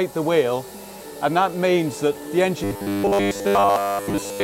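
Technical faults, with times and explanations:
2.64–4.44 s, robotic sound from repeated short buffers: from 2.64 s to the end, the sound turns into a rigid, metallic buzz at 100 Hz that only loosely follows the original. The likely cause is audio arriving too slowly, so a chunk of about 10 ms is replayed in place of the missing audio. On a spectrogram this shows as evenly spaced harmonics at 100 Hz intervals, and the waveform shows similar cycles repeating roughly every 10 ms.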